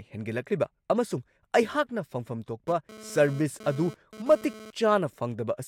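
A nearby 2G handset transmitting in bursts at about 217 Hz has had its radio pulses rectified by the audio circuitry of this speech recording, producing GSM phone buzz. Starting right after "ꯍꯦꯟꯒꯠꯂꯛꯂꯤꯕ ꯑꯃꯁꯨꯡ ꯑꯩꯍꯥꯛꯅ ꯐꯪꯐꯝ", from 2.68 to 4.71 s, a hard, raspy 217 Hz buzz rich in harmonics sits about 18 dB below the voice, unrelated to it. It comes and goes rather than holding steady, which points to a data transfer rather than a call.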